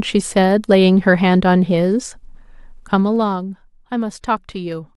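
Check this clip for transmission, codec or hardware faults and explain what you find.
One fault stands out: zipper noise from 2.76 to 3.52 s, where the speech drops by about 10 dB in 1 dB steps at roughly 30 per second instead of gliding. Each unsmoothed step clicks, giving a fast ticking; the waveform envelope shows a staircase, the spectrogram thin vertical lines.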